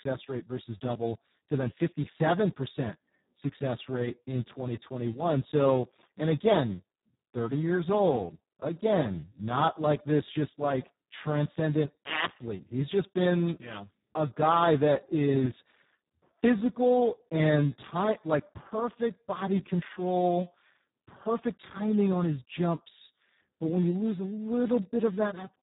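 Speex codec damage runs throughout this speech recording: heavy CELP coding leaves it hoarse, robotic and empty above 3.8 kHz, which points to a bitrate near 4 kbps. A loudspeaker feedback squeal starts at 24.41 s, after "when you lose a", and lasts to the end at 25.63 s. A 6.5 kHz tone swells over roughly a second to around 10 dB above the speech as the microphone picks up its own loudspeaker.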